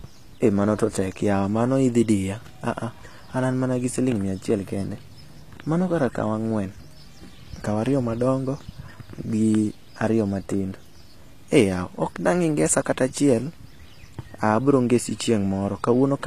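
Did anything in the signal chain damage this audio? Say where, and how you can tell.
Yes. Throughout the speech the s sounds come out gritty and metallic, with a lisping edge, and nothing reaches above about 14.9 kHz. The stage is the codec, and the likely cause is HE-AAC compression. Only the lower spectrum is truly coded. The upper band is rebuilt by copying lower bands upward under a coarse envelope, so its harmonics never line up with the real ones. The plainly audible damage fits a low bitrate around 24 kbps.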